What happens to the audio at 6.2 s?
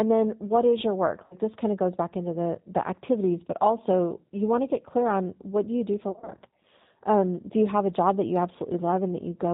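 Right after "do you do for", from about 6.09 to 6.34 s, you're hearing VoIP packet loss concealed by the speech codec. About 140 ms of audio goes missing in short gaps, the longest around 40 ms, scattered over roughly 220 ms. The decoder fills each gap by stretching its last pitch and filter at falling gain, so the sound turns into a buzzy tone or coloured noise that fades. It stays weak for a bit afterward because each frame builds on the damaged one before it.

Underneath that, the whole clip runs through the G.729 codec at 8 kbit/s, and the damage is plainly audible. The codec rebuilds speech from a vocal tract filter, a pitch predictor and a few pulses per frame. That leaves the sound a bit rough and synthetic, with nothing above 4 kHz.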